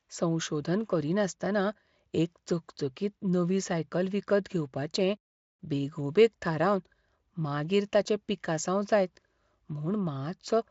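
No technical faults can be heard in the speech, which carries Speex coding with content extending up to about 7.7 kHz and nothing above that.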